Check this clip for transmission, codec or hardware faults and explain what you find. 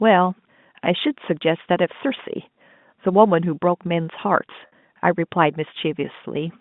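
There's one transmission fault in this speech: a brief packet loss with pitch repetition at 4.67 to 4.72 s. About 50 ms of audio went missing, which fits five 10 ms packets. The receiver patched the gap by repeating the last pitch period and fading it, so you hear a short, slightly held, buzzy sustain rather than a hard dropout. The G.711 telephone band, roughly 150 Hz to 3.6 kHz, can be heard throughout.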